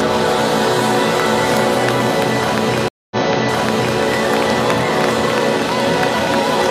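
A stream reconnect at 2.88 to 3.99 s: the link dropped, leaving about 0.23 s of silence, then a fresh decoder resumed the audio roughly 0.88 s earlier, replaying material.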